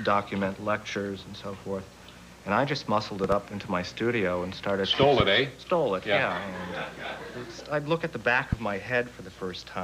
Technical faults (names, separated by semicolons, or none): loud pop